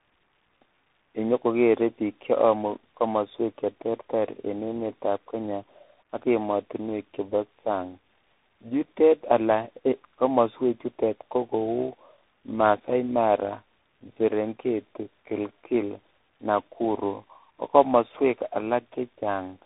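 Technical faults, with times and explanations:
Throughout: tandem speech coding. This speech has been through several speech codecs one after another, three of them low-rate or waveform coders of different kinds. It went from AMR-NB at 10.2 kbit/s into G.711 mu-law, then CVSD at 64 kbit/s, back to G.711, and CVSD again. Each hop decodes and re-encodes the previous coder's mistakes, so the errors pile up. You get that rough, warbly, muffled quality, and nothing survives above about 3.8 kHz.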